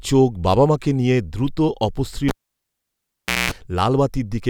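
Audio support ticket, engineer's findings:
Cable pulled and plugged in, 2.28–3.52 s: pop, 1.18 s near silence, then 210 ms of 60 Hz mains buzz as only the plug tip touched, pop on return. Live cable. The buzz before the return rules out a plain dropout.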